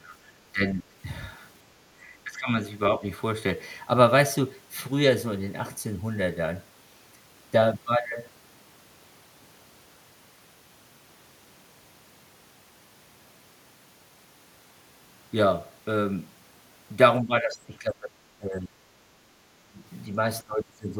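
Speech suppressed in double talk cuts into this speech recording at 0.0–0.16 s, 0.53–0.95 s, 2.24–2.5 s, 2.99–3.03 s, 17.22–18.76 s, 19.56–19.83 s and 20.42–21.0 s. The level sinks by roughly 20 to 25 dB in most of these spots, only slightly near 3 s, and the longest dip runs about a second and a half. The likely cause is an echo canceller that, with both ends talking at once, couldn't tell the local talker from loudspeaker echo and turned everything down.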